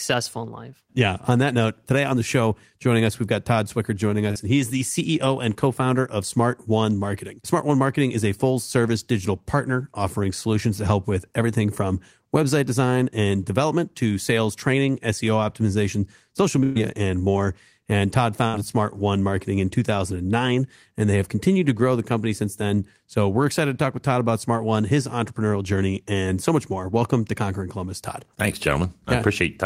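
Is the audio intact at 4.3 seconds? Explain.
No, there's a short concealed packet loss from about 4.31 to 4.37 s. Roughly 40 ms of speech didn't reach the decoder in time, so the receiver stretched the preceding sound to cover the gap and then blended back, leaving a brief smear or wobble.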